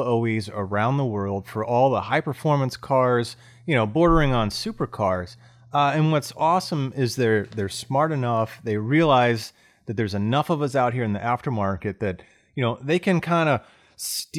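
Nothing to flag here: the speech runs along without a single technical fault turning up anywhere in it.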